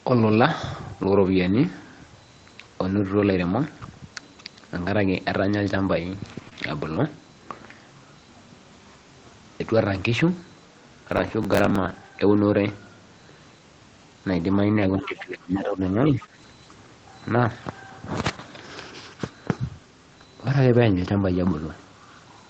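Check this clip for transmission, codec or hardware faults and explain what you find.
There are a few network glitches, one stretch of processor overload crackle, and some echo-canceller trouble in the middle of the speech.

Lost packet rebuilt from error correction, at 1.43–1.49 s and 21.14–21.24 s: the missing audio was replaced from low-bitrate backup copies, so there's no gap, but those roughly 40 and 60 ms sound rougher and noisier.

Short concealed packet loss, at 6.49–6.55 s: about 20 ms never arrived. The decoder stretched the preceding sound to cover it, leaving a brief smear or wobble.

Processor overload crackle, at 11.12–11.95 s: around twenty buffers, which fits roughly 10 ms each, missed their deadline and replayed old audio. You hear gritty, hard-edged crackling that stops when the load passes.

Speech suppressed in double talk, at 14.96–15.80 s and 16.08–16.33 s: the speech dips by up to about 20 dB, then about 10 dB, likely because the echo canceller ducked it while both sides talked.

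Other side's voice leaking through, at 16.05–16.10 s: a faint scrap of a second voice comes through, about 25 dB below the speech, likely residual loudspeaker echo. The Opus path, which fits about 24 kbps, caps everything at 8 kHz.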